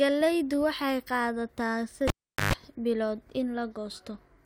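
Speech, with a cable pulled and plugged in from 2.08 to 2.53 s, just after "waxay qaadataa". A pop opens 408 ms of near silence, which includes 124 ms of 50 Hz mains buzz, and then a second pop.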